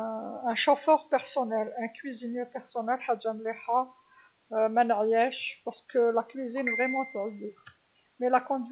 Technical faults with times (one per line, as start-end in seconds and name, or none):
none